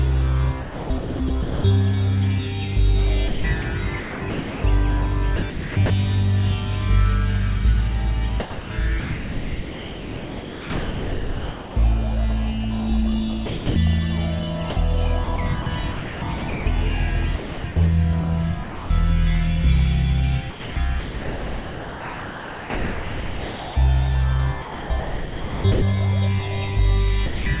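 Sound chopped by the voice detector appears five times: 0.62 to 1.64 s, 3.28 to 5.9 s, 8.4 to 11.76 s, 13.46 to 18.9 s and 20.5 to 25.82 s. The sending side likely switched on and off repeatedly, treating quieter passages as background. Within these stretches, about 0.74 s, 1.1 s, 3.06 s, 1.54 s and 4.04 s of real sound are replaced by synthetic comfort noise. The result is choppy, all heard through a narrow telephone-like band with nothing above 4 kHz, which fits G.711 coding.

Sound dropped by the voice detector occurs from 27.26 to 27.46 s. The detector likely misjudged quiet sound as background and stopped sending. About 200 ms of audio is lost and replaced by steady comfort noise. The sound simply gives way to even, featureless noise for that moment rather than fading naturally.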